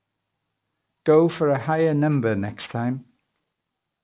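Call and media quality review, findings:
Aliasing, throughout the speech. Sibilants gritty and metallic, with stray tones unrelated to the voice. Probable component: resampler lacking an anti-alias filter, consistent with a 48 kHz to 8 kHz conversion. Content above 4 kHz folds back down, roughly 25 dB under the signal. Spectrogram: energy pressed hard against a 4 kHz ceiling, with mirrored, inverted-slope streaks below it.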